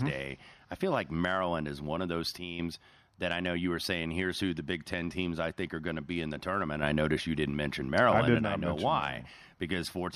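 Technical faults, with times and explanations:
2.38–2.59 s, sudden gain jump: the level is likely switched in one step with no ramp, cutting the gain by about 7 dB for roughly 0.2 s. The speech and the background noise drop together and return just as abruptly, so the dip sounds like the signal path itself stepping down rather than the talker getting quieter.
4.47–6.66 s, Bluetooth SBC bit pool drop: the Bluetooth link appears to have congested, and the sender cut the SBC bit pool, in a way that fits a fall from 28 to 14, or about 108 kbps. With half the bits, the top sub-bands are starved and the lower ones are quantised coarsely. For about 2.2 s the speech loses its treble and a gritty noise rides on it.
6.83–8.39 s, sudden gain jump: a gain step, likely applied instantly without a ramp, raises the level by about 6 dB for roughly 1.6 s before it drops back. Speech and noise floor both jump up together, which is what marks it as a system change and not a louder voice.
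9.84–10.15 s, Bluetooth SBC bit pool drop: the same reduction in bit pool hits again, pointing to roughly 108 kbps, and lasts to the end of the audio. The treble dulls and the gritty quantisation noise returns over the final 0.3 s.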